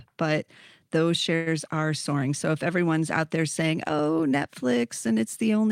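Speech with a call audio freeze from 1.35 to 1.48 s: the sound hangs on as a fading buzz for about 110 ms instead of moving on, then resumes where it stopped, so nothing is lost but everything after arrives roughly 110 ms later. This is likely a jitter buffer running dry while packets were delayed. A spectrogram shows flat horizontal streaks continuing the last spectrum and dimming, with no silent gap, and the waveform shows a repetitive, shrinking stretch.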